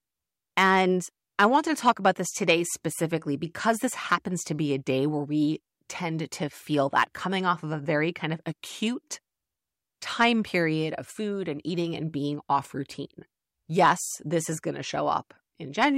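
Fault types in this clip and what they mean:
No faults can be heard anywhere in this recording.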